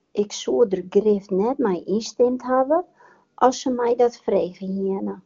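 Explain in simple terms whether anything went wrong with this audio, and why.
Right at the start, from about 0.03 to 0.13 s, there's a short patch of AMR comfort noise. For that tenth of a second the phone treated the line as silent and sent no real sound, so the receiving end filled the gap with smooth, steady fake hiss before the actual audio came through the wideband codec.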